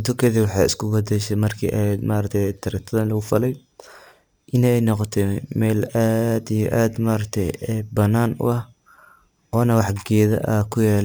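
Imaging from sample-and-hold upsampling runs throughout, which fits 24 kHz speech repeated up to 48 kHz unfiltered. A mirrored band fills 12 to 24 kHz, about 26 dB down, as metallic fizz.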